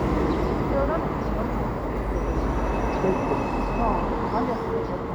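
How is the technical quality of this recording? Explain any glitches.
No glitches are audible anywhere in this recording of sounds.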